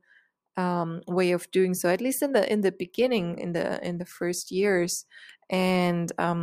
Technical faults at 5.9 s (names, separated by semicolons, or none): none